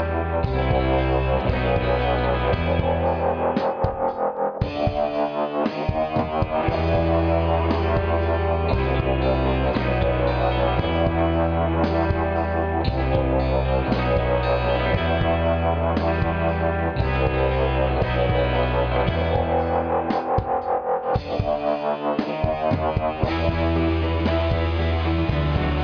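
Nothing in this recording stands out as a technical problem; the sound just carries on without a hitch the whole way.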